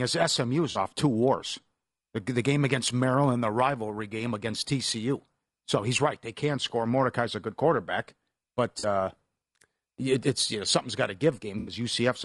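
The whole speech clip has a rough, grainy texture, with noise filling the gaps between the voice's harmonics and a top band that sounds thin and synthetic. That's most likely low-delay AAC compression, the AAC-ELD flavour used for video calls. Its short frames can't resolve pitch detail well, and at a rate that fits something like 32 kbps the damage is plainly audible.

Three dropouts are patched over by AAC frame loss with concealment, where the decoder fills in missing frames from the last good spectrum. The first runs from 0.71 to 0.77 s, just before "off two wars the", and is a brief smeared, noisy patch about 40 ms long, which fits two lost frames. The second, from 8.79 to 8.85 s right after "a good quarterback but", sounds the same. The third, from 11.59 to 11.73 s after "know something's got to", is longer, about 80 ms.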